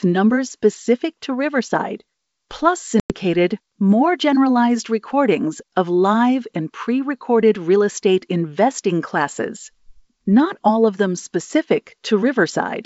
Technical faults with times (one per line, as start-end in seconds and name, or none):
3.00-3.14 packet loss on an ADPCM call